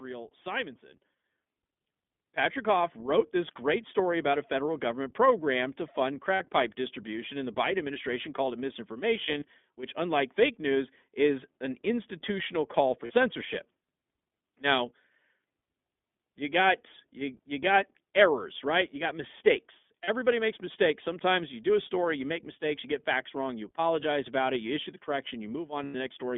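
Speech with a thin, slightly rough and synthetic quality throughout, with nothing below about 200 Hz or above 3.5 kHz. This is iLBC codec narrowband coding, which fits its 15.2 kbps mode with 20 ms frames. The level jumps abruptly, voice and background together, at 1.02 s by about 8 dB and at 2.85 s by about 3 dB, as the microphone volume was stepped up by the call software. Brief held, buzzy vowel-like smears interrupt the speech at 6.34–6.42 s, 13.06–13.13 s, 20.04–20.09 s and 25.84–25.96 s, plus a scattered run of short roughly 20 ms blips across 9.26–9.44 s. These are lost iLBC frames, with the decoder repeating the last pitch cycle mixed with noise for 40 to 100 ms, and clear speech resumes immediately after each one.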